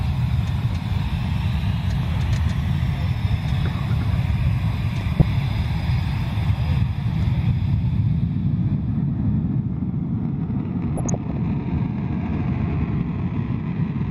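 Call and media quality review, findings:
DAB burbling, 5.20–5.22 s and 10.97–11.37 s: short noise blips in the audio. Probable component is the DAB receiver path. A residual bit error rate of roughly 0.2% past error correction corrupts MP2 samples, causing short sub-band noise bursts.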